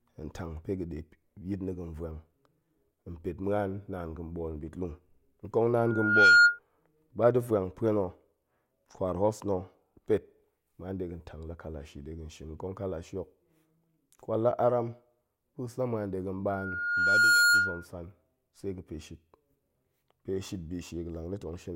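Loudspeaker feedback squeal at 5.86–6.59 s and 16.49–17.86 s: a 1.4 kHz tone swells over well above the speech as mic-speaker loop gain exceeds unity.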